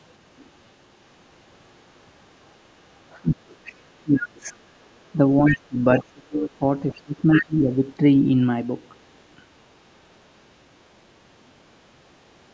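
Speech suppressed in double talk sets in from 3.22 to 4.53 s, with about a second of that stretch pulled down, at worst by something like 25 dB. The talker's voice sinks, most likely because both ends were talking at once and the echo canceller, unable to tell this talker from the loudspeaker echo, attenuated everything it heard.

Other side's voice leaking through appears inside that dip, from 3.65 to 3.72 s: a brief, faint scrap of a second voice, roughly 25 dB under the talker. The same thing happens four more times during the later dip: 5.46 to 5.59 s and 7.32 to 7.75 s, both fairly prominent at around 10 dB down; 5.97 to 6.03 s, at about 20 dB down; and 6.97 to 7.01 s, barely audible at about 30 dB down. These are likely pieces of the far end's loudspeaker playback that the echo canceller failed to subtract from the microphone signal.

Background gated by the echo canceller follows from 4.81 to 4.89 s. 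For about 70 ms the room sound drops by about 11 dB and then returns, because the canceller clamped the microphone hard while the loudspeaker was active and then released it.

A second, longer bout of speech suppressed in double talk runs from 5.17 to 7.84 s. Around one and a half seconds of it is cut back, at deepest roughly 30 dB. The band-limited call path has nothing above 8 kHz.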